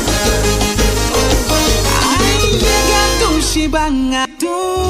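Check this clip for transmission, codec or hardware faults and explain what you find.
The clip has one fault type, damaged data in a compressed stream, occurring twice: at 2.39 s and 4.25 s. At each point part of the encoded stream was corrupted, so the decoder misread the affected frame, lost sync and had to search for the next valid frame header. Each event is a brief chirp, squawk, click or short hole. On a spectrogram it appears as a brief vertical break in the surrounding pattern, and on the waveform as a short disruption of the surrounding envelope.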